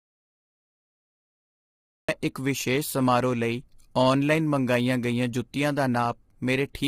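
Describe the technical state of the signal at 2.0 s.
At 2.0 s the signal is inside an audio dropout to silence that is already under way when the clip begins and runs until about 2.09 s. The input was likely lost, through a disconnected device, a failed link or a mute, while recording carried on writing silence. The result is silence with no room tone at all, and whatever was happening in that stretch is simply gone. Sound returns abruptly just after this moment.

The whole clip, this point included, also carries low-delay AAC compression, most likely AAC-ELD, the codec used for video calls. Its short frames, around 10 ms, capture pitch harmonics poorly, and the damage here is heavy, which fits a bitrate near 24 kbps. Once the speech returns it sounds rough and grainy, with noise filling the gaps between harmonics, and nothing above about 23.4 kHz.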